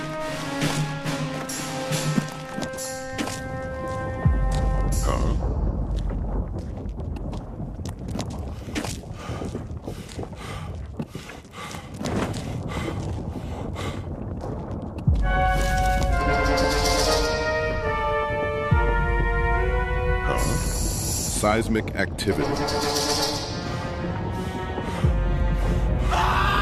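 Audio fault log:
9.04–9.07 s, 16.55–16.64 s and 24.34 s: DAB burbling. Brief bursts of noise where weak-reception bit errors slip past error correction, putting short blips of noise in single sub-bands.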